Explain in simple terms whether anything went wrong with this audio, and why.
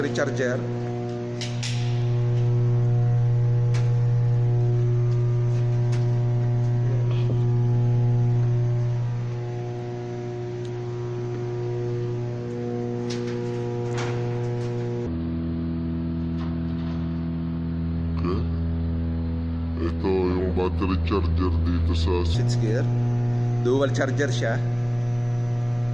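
From 15.06 to 22.34 seconds, the sound suddenly turns slow and deep. This is a wrong sample rate fault. The audio plays at about 0.69 times its proper speed, and its pitch drops about six and a half semitones. That fits sound recorded at 32 kHz but played at 22 kHz.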